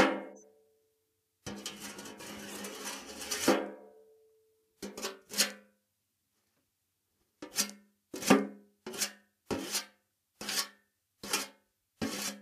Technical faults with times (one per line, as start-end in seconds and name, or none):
0.30-0.44 compressed frames skipped
2.40-2.54 corrupt frame decoded
9.60-9.65 corrupt frame decoded